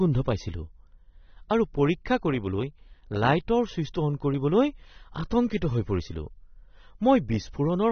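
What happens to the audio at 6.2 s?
At 6.2 s, as throughout the clip, the speech carries the sound of AAC compression, likely from heavy AAC-LC encoding at a low bitrate in the region of 24 kbps. Nothing is left above about 6.3 kHz, because the encoder lowers its cut-off and spends its few bits on the lower bands. The speech sounds dull and smeared, with a warbling, fizzy texture on sustained sounds and sibilants.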